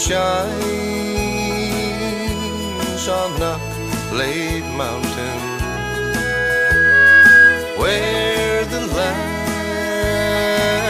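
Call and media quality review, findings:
Loudspeaker feedback squeal, 5.42–7.68 s. Steady 1.6 kHz tone swelling over about two seconds to roughly 15 dB above the rest of the sound. Mic picking up its own speaker, loop gain above one at 1.6 kHz, so it runs away.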